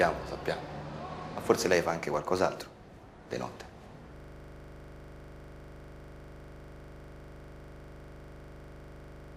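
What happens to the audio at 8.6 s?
At 8.6 s the audio is stuck in a system hang loop. It began at 4.16 s and runs to the end. The system froze while the sound hardware kept replaying one 40 ms buffer, over a hundred times. That repeats at 25 Hz, giving a rapid, machine-gun stutter.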